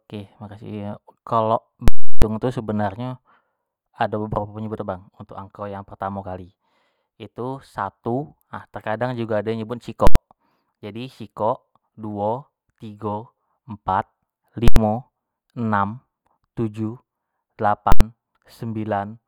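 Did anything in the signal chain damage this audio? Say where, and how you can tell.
Yes. Invalid numbers at full scale, from 1.88 to 2.22 s and at 10.07, 14.68 and 17.92 s. A processing calculation produced infinite or invalid values, and sample-format conversion pinned them to full scale. The 341 ms block, which fits 16384 samples, gives a loud pop, silence, then another pop. The 85 ms blocks, which fit 4096 samples, each give a single bang.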